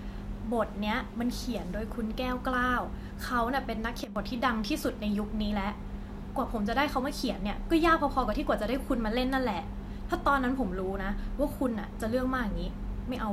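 At 4.04 s the level suddenly drops by about 12 dB, voice and background noise together, and comes back at 4.16 s. That's a sudden gain jump, likely a gain change applied between one sample and the next with no ramp to smooth it.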